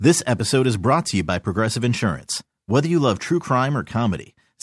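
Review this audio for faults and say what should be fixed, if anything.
No faults found, so nothing needs fixing.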